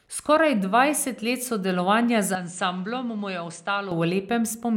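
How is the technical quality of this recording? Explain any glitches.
The recording has one clear glitch, a stretch where the sound briefly loses quality.

From 2.35 to 3.92 s, after "dvajset let sodelovanja", the input was likely switched to a poorer device passing nothing above 9.1 kHz. The sound turns duller, about 10 dB quieter and carries its own background noise roughly 30 dB below the speech, without a gap.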